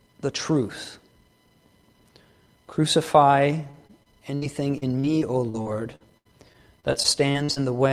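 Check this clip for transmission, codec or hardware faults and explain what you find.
Yes, there is one transmission fault. Repeated packet loss (robotic sound) runs from 3.71 to 7.58 s. About eighteen short holes, none longer than 74 ms and covering roughly 15% of the stretch, are patched by extending the preceding sound. This leaves a choppy texture with fragments missing.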